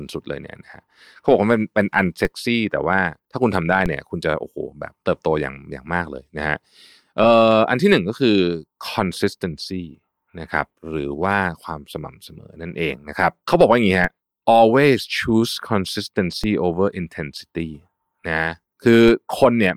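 DC steps at 2.25, 3.86, 14.04, 16.44 and 19.08 s: the waveform's zero line jumps abruptly by about -14 to -12 dBFS, then drains away as a 20 Hz high-pass lets the offset decay. Each jump lands as a low thump under the unchanged speech.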